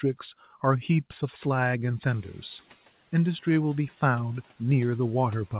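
Right around 2 s the room noise jumps, and from 2.1 to 2.68 s the noise suppressor is catching up, letting it through with less reduction at first before it sinks by about 7 dB.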